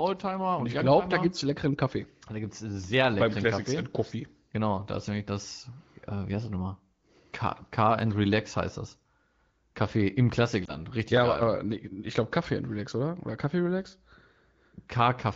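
At about 10.66 s there is a brief dip or warble in the speech. This is a lost AMR speech frame. A single 20 ms frame failed its checksum after radio errors. The decoder filled the gap by reusing the previous frame's pitch and vocal tract settings at reduced gain. The result is a short, slightly smeared blip rather than silence. The speech then returns a little weak or rough for a moment before settling. The AMR-WB coding around it sounds lightly coded, which fits a rate near 15.85 kbit/s.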